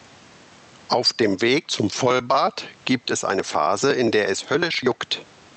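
Speech recorded with gain pumping throughout, with a swing of roughly 15 dB, so loud and quiet passages sit unnaturally close in level and the delivery sounds squashed. The likely cause is microphone gain set far too high, with a fast limiter or compressor clamping down on every peak and releasing in the gaps. The room noise sits about 43 dB below the speech.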